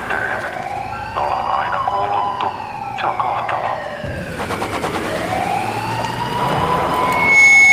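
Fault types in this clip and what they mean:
Loudspeaker feedback squeal: A microphone is picking up the loudspeaker it feeds. At one frequency the loop gain goes past one, so that tone keeps reinforcing itself. Here it starts at 6.92 s as a single pitch near 2.2 kHz. It swells over roughly half a second to sit around ten decibels above the rest of the sound. The squeal then holds until the clip ends at 7.72 s.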